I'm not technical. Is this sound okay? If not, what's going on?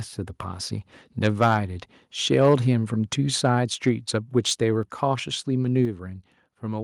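No. Two problems can be heard. The first is microphone overload, at 1.42 to 1.54 seconds and again at 2.35 to 2.54 seconds. The loudest bits turn harsh and crackly there. The likely cause is a microphone set too loud, so the tops of those peaks get cut off.

The second is the microphone volume stepped down, at 4.83 and again at 5.85 seconds. Each time, the voice and the background suddenly get quieter in one jump. This is likely the call software lowering the microphone level because it sounded too loud.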